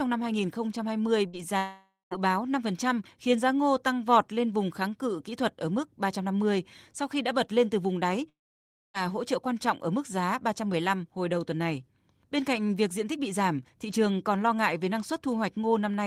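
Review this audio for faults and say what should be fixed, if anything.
Burst of packet loss at 1.27 to 1.36 s: about 60 ms of audio never arrived, so the receiver stretched the last sound into a brief fading tail before the speech resumes further on.

Long network dropout, twice: at 1.57 to 2.14 s, the speech stops and the last sound is drawn out and faded, ending in about 160 ms of silence. At 8.29 to 8.97 s, there is about 0.6 s of silence. Each time the speech returns with roughly half a second or more skipped. The likely cause is a network outage during which the receiver concealed what it could and then went quiet.

Preventing this needs a more stable network path, with forward error correction and a deeper jitter buffer so short losses can be recovered rather than concealed.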